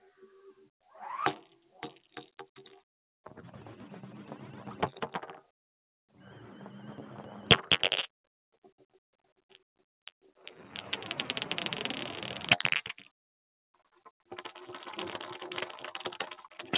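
From the start, held sounds and decaying tails pump and thin by a few decibels while sharp onsets come through intact. This is a noise suppressor applied to music or sounds: a speech-tuned suppressor was left on and keeps mistaking steady or fading sound for background noise, turning it down. The audio also stops at 4 kHz, which fits a G.711 mu-law call codec on the way through.

From 1.59 to 1.75 s the sound briefly sinks, by about 9 dB at its deepest. It reappears at 8.53 to 10.4 s and 13.75 to 14.31 s as much deeper drops of about 21 dB, swallowing roughly a second and then a shorter stretch. Each is sound cut by the noise suppressor, which pulled this material down harder than its surroundings.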